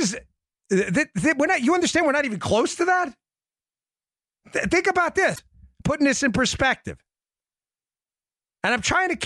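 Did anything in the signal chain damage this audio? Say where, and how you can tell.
Yes. The speech jumps abruptly at 5.34 s, with a short disturbance running to 5.39 s, and again at 8.03 s. This is likely a broken MP3 bit reservoir at the codec stage. Frames appear to have been dropped, so the next frame borrows data from earlier frames and gets foreign bytes instead, decoding as noise or a gap for roughly a frame or two of about 26 ms each.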